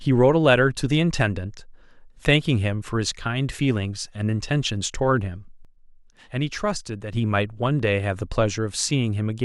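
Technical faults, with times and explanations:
5.65 to 7.13 s, sudden gain jump: speech and background noise drop together by about 7 dB, then return, likely from a gain setting applied without a ramp.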